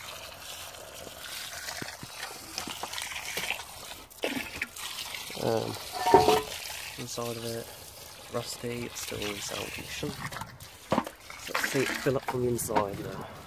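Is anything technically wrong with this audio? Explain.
No, nothing technically wrong here.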